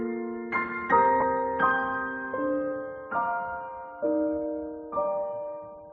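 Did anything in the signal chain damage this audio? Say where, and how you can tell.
Yes. The damage is on the Bluetooth link, at the codec stage. From 1.20 to 1.22 s, about 15 ms of sound turns into a brief noisy smear. That fits two lost LE Audio frames. The LC3 decoder concealed the gap by repeating the last spectrum with random signs.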